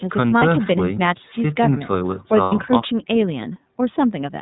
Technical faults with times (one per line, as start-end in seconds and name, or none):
0.00-4.41 iLBC codec
0.39-0.42 lost iLBC frames
2.42-2.53 lost iLBC frames